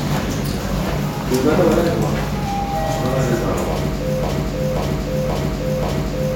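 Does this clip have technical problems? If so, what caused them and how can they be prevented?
Yes: from 4.23 s to the end there's a broken-record loop, a 0.53 s fragment repeating four times, likely a stalled player or stream resending its last buffer. A watchdog that detects repeated buffers and flushes or restarts playback would prevent it.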